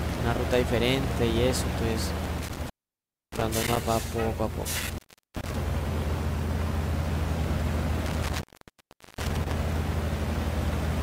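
Intermittent contact hits three times, around 2.24–3.77 s, 4.79–5.55 s and 8.06–9.53 s: a loose connection drops the sound for roughly 625, 383 and 762 ms, with crackle at the edges.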